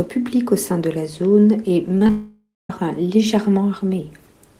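Right after "de la zone est" you get a quick run of short concealed packet loss: 1.95 to 1.97 s, 1.97 to 2.02 s, then 2.07 to 2.10 s. Gaps of roughly 10, 30 and 20 ms never made it to the decoder, so the receiver stretched the last bit of sound over each hole and blended back. It comes across as a little smear and wobble.

Straight after that, from 2.10 to 2.70 s, there's what's likely a long network dropout. About 600 ms of audio is gone. The receiver first keeps extending the last sound as a buzzy, hissy tail that fades out, and the final 200 ms or so is just silence. When the sound picks up again at 2.70 s, the missing stretch simply isn't there.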